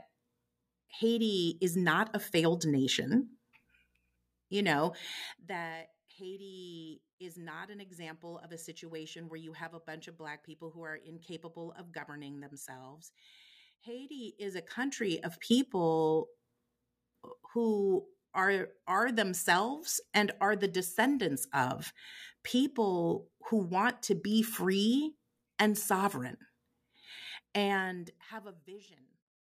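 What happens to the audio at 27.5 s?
At 27.5 s the speech plays through intact, with no fault to be heard at that moment.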